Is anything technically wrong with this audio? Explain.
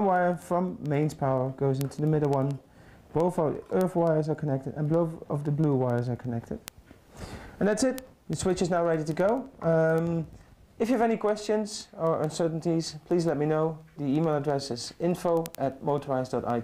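Yes. The receiving device is running on its own clock, unlocked from the sender's and off by a few hundred parts per million. Each slip drops or repeats one sample, causing word clock ticks: sharp clicks of uneven strength, roughly every tenth of a second, from 0.16 s to 16.59 s.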